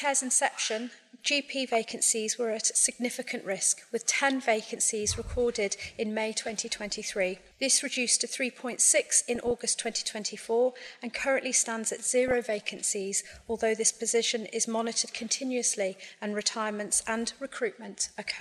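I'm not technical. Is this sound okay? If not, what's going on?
No. There are five short bursts of DAB burbling at 1.67, 3.76, 6.37, 8.99 and 12.28 seconds. Weak digital radio reception lets a few data errors slip through, so slices of the sound get short blips of noise. Unlike a dropout, the sound keeps playing underneath.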